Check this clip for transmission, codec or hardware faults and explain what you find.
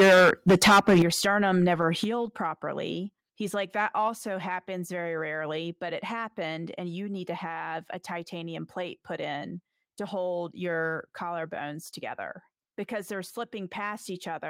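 Two faults are audible: overload at the start, then two sudden drops in level.

From 0 to 1.02 s there is microphone overload, likely from input volume about 12 dB too high. Roughly a fifth of samples are clipped, giving crackling distortion, flat-topped waveform peaks and smeared high-frequency energy on the spectrogram.

The microphone volume is stepped down at 1.02 s by about 10 dB and again at 2.04 s by about 6 dB, likely automatic gain reduction by call software. Voice and background drop abruptly, showing as sudden narrowing of the waveform envelope.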